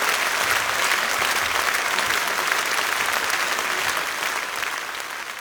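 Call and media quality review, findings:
Damaged data in a compressed stream: brief glitches at 1.44 to 1.50 s and 4.93 to 4.98 s; decoder misreads corrupted frames, loses sync, resynchronises on the next header.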